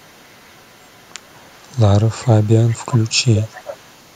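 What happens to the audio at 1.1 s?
At 1.1 s there is an echo leak, running from 0.00 to 1.82 s. A very faint copy of the speech trails about 389 ms behind. Likely an echo canceller let loudspeaker pickup through.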